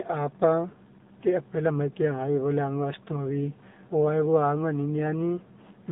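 The clip is speech passed through an AMR narrowband mobile codec for its whole length. The band runs from about 150 Hz to 3.7 kHz, with nothing above 3.7 kHz. The top end is gone and the low bass is thin. Codec damage is plainly audible. The voice sounds buzzy and synthetic. AMR-NB rebuilds speech from a vocal-tract model fed by a few pulses per 5 ms subframe. This damage fits a low bitrate mode of about 7.4 kbps.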